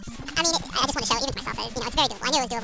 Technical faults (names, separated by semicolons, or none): wrong sample rate